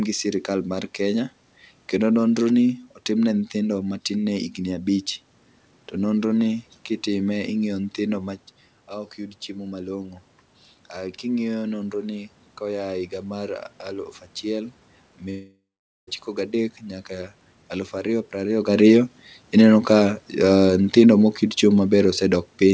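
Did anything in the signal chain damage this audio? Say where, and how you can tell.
Yes, a long network dropout from 15.30 to 16.09 s. The speech smears into a fading buzz, then goes silent for about 0.46 s before resuming at 16.09 s with roughly 0.78 s simply gone. That's most likely lost packets the jitter buffer could only conceal.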